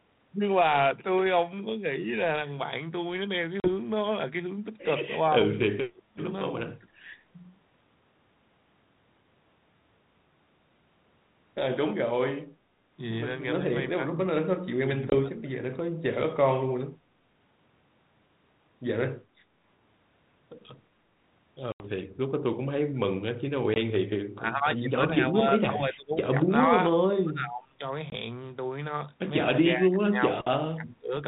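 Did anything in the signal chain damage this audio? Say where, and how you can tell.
Yes. In the network, packets went missing on a 32 kbit/s G.726 ADPCM call, causing packet loss, at 3.6 s (40 ms), 15.1 s (20 ms), 21.72 s (80 ms), 23.74 s and 28.1 s (20 ms each). Each gap is a hard-edged silence. Afterwards the decoder's predictor and step size no longer match the sender's, so speech resumes slightly distorted before settling.

In call processing, the echo canceller was likely confused by double talk and turned the talker down along with the echo, suppressing speech in double talk. Speech dips by up to about 30 dB in pieces across 5.77–6.9 s, 13.69–15.77 s, 16.44–16.69 s, 24.35–27.82 s and 29.62–31.13 s.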